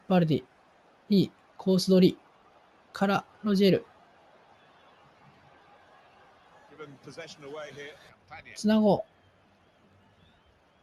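Throughout, a noise suppressor applied to music or sounds pulls sustained tones and tails down by about 10 dB, leaving pumping, thinned audio with spiky waveform attacks and gappy spectrogram decays.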